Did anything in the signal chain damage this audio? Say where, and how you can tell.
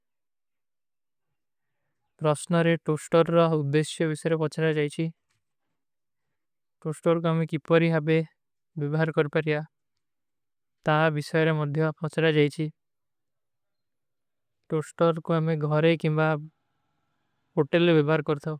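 No, nothing in the signal chain damaged this audio.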